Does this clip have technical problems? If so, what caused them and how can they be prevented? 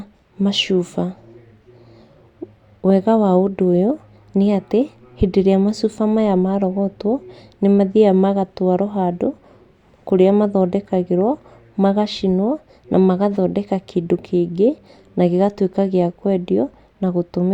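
No, there are no technical problems to address here.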